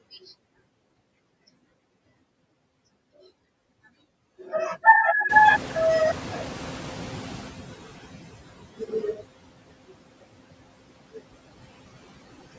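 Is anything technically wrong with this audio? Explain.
Yes. Two related faults affect this speech clip.

Noise suppressor artifacts run through the whole clip. The suppressor judges, frame by frame, which frequency bands hold steady noise. It pulls those bands down by about 17 dB. The background therefore drops away in the gaps between words and comes back up beneath them. That pumping is what you hear. The noise floor never stays still, so the background seems to breathe along with the talking.

The noise suppressor is catching up from 5.29 to 8.35 s. Room noise jumps by about 18 dB at around 5.5 s. The suppressor's picture of the noise is still based on the quieter level before the jump. For a moment the louder noise passes with less reduction. The estimate then adapts over roughly 3.06 s and the cut settles to about 14 dB. The noise swells and then slowly sinks back.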